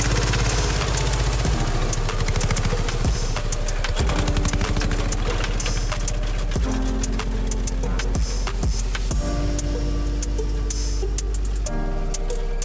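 Aliasing runs throughout the clip. Content above 8 kHz was not filtered out before the rate was lowered, which fits a drop to 16 kHz, so it folds back below that edge as unrelated tones, roughly 20 dB under the signal, giving a gritty, metallic top end.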